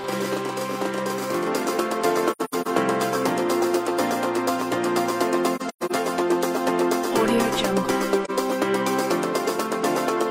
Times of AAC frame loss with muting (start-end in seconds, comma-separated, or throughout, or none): 2.31-2.67, 5.55-5.92, 8.24-8.31